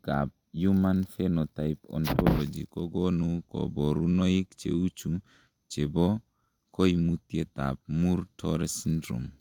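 No technical faults are audible anywhere in the recording.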